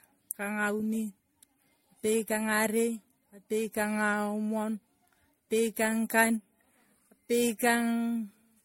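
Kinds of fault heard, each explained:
Generation loss: the speech sounds swirly, smeared and hollow, with blurred consonant attacks and nothing above 16.5 kHz, most likely from repeated MP3 decoding and re-encoding, roughly seven passes at something like 64 kbit/s. Each pass quantises on a shifted frame grid, so noise and spectral gaps pile up. A single low-bitrate encode would mostly sound band-limited and slightly watery. Here the degradation is deeper and more diffuse than that bitrate alone would produce.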